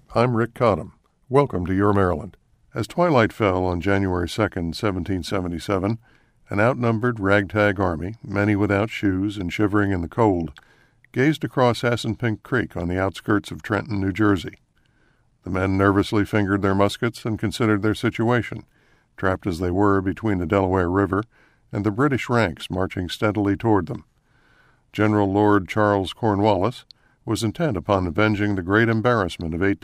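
No technical faults are audible anywhere in the recording.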